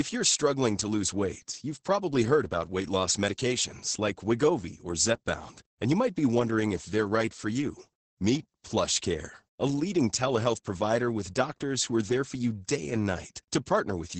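Throughout, the speech sounds muffled, hoarse and robotic, with nothing above 8.7 kHz. This is heavy Opus voice compression: the SILK linear-prediction coder, working in wideband mode, codes the excitation coarsely, which fits a bitrate around 10 kbps.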